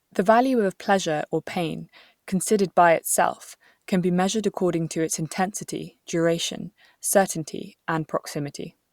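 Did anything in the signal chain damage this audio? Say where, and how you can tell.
No, nothing in the signal chain has damaged this speech recording. None of the stages between capture and playback leaves any audible trace on it.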